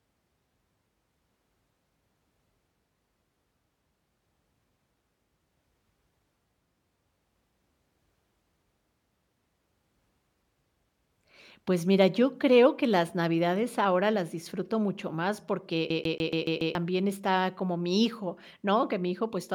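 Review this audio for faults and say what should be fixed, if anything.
A CD stuck on one turn runs from 15.90 to 16.75 s, after "las disfruto mucho más": a 142 ms slice repeats six times with brief mutes, evenly spaced, unlike an irregular dropout stutter. Resurfacing or replacing the scratched disc, or re-ripping with error-correcting software, would prevent it.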